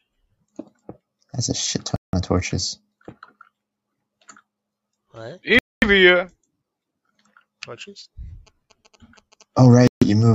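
At 1.96 s the sound drops to silence for 171 ms, again at 5.59 s for 233 ms, and at 9.87 s for 141 ms. Each gap cuts abruptly. This is a Bluetooth stall, likely caused by interference delaying packets until the headphone buffer ran empty.

From 8.47 s to 10.23 s, GSM signalling bursts appear: a galloping dit-dit-dit of short 217 Hz buzzes, about 25 dB below the programme. A nearby 2G phone exchanging signalling bursts is being rectified by the audio circuitry.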